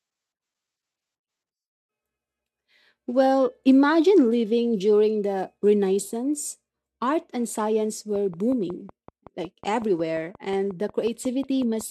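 Speech, and right after "and science" at 8.16 s a train of clicks kicks in, running to 11.82 s: about twenty evenly spaced ticks at roughly 5.5 per second, peaking about level with the speech. That's likely interference from nearby equipment or a faulty connection or power supply.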